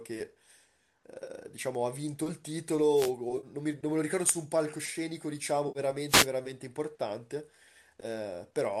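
Speech passed, likely, through low-delay AAC coding, and it carries two kinds of fault. AAC frame loss with concealment appears at 1.24 s (30 ms), 3.37 s (60 ms) and 5.68 s (70 ms): the decoder rebuilds each gap from the last good spectrum, so the sound smears into a brief phasey, noisy patch rather than adding hiss. The longer gaps fit runs of 10 ms frames. Wireless microphone noise hits at 2.95–3.12 s and 6.08–6.27 s are different: a fading radio signal lets receiver static swish up over the speech as a burst of broadband noise.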